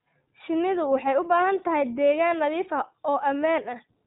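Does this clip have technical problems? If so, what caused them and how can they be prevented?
Yes. Throughout the speech, the signal has gone through the iLBC codec, a narrowband VoIP coder that encodes each frame's excitation on its own rather than building on the previous one. The character fits its 15.2 kbps mode with 20 ms frames. The result is plainly audible: everything above 3.8 kHz is gone, so consonants lose their crispness, and the voice takes on a rough, slightly synthetic texture. To prevent this, record or transmit with a wideband codec at a higher bitrate.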